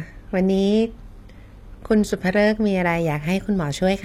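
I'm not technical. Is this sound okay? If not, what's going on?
No. The speech sounds dull and swirly until about 2.55 s, then suddenly clears. This is an adaptive stream starting at a low bitrate, stepping up once the connection was measured.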